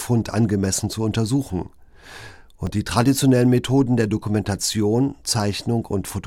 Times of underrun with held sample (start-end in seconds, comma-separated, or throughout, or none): 0.51, 2.66